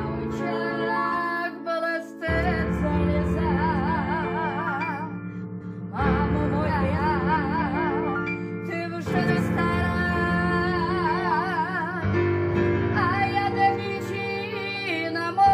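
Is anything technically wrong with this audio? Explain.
Yes. Frames out of order occur five times: 0.49–0.89 s, 5.42–5.82 s, 6.67–6.98 s, 9.18–9.40 s and 13.78–14.18 s. In each, two adjacent blocks of roughly 0.19 s (0.14 s at 6.67 s, 0.09 s at 9.18 s) were decoded swapped. The result is a brief garbled flutter, but no time is lost. On a waveform or spectrogram, each event shows three abrupt vertical seams where the envelope and harmonics jump discontinuously.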